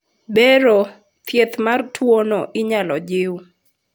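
Speech recording with no audible technical faults.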